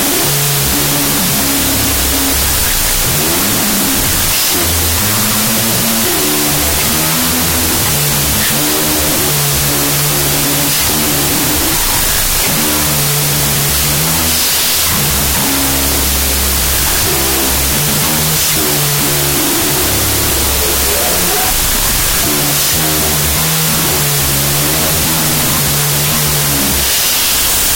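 A wrong sample width runs through the whole clip: audio stored as 32-bit floating-point values appears to have been read back as 16-bit integers. Each original sample is split into two halves. The upper halves carry sign and exponent bits that loosely follow the speech, while the lower halves are near-random mantissa bits. The result is loud, harsh noise with the speech buried inside, playing at half speed and an octave low.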